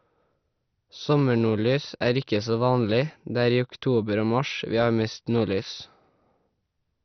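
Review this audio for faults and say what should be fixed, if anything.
Right through the speech there's a dull, gurgling graininess, and nothing survives above about 6.2 kHz. That's likely MP2 compression. Layer II has starved its sub-bands, switching the upper ones off and quantising the rest coarsely, which fits a low rate around 48 kbps. To prevent it, encode at a much higher bitrate or use a more efficient codec.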